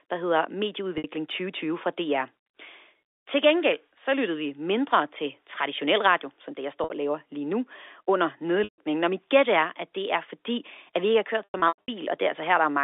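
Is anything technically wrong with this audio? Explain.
Yes. The speech has packet loss with pitch repetition at 0.98–1.04 s, 6.84–6.90 s, 8.64–8.78 s and 11.44–11.88 s. There the receiver loops the last pitch period to cover missing audio, so the voice briefly holds with a buzzy tone. Unlike plain dropouts, the short gaps aren't silent. The 140 ms loss and the scattered 280 ms at the end fade toward quiet. The telephone band is heard throughout.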